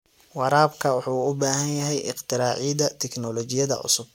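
Nothing goes wrong anywhere in this bit of speech; there's simply no technical fault to point to at any moment.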